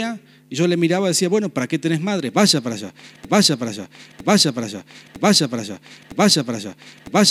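From 3.25 s to the end, the speech sticks in a broken-record loop: a fragment of about 0.96 s plays back to back four times, each repeat identical, so the same sliver of sound cycles mechanically until the audio stops. The likely cause is a player, encoder or stream that stalled and kept re-sending the last fragment in its buffer. Whatever speech belonged in those final seconds never arrives.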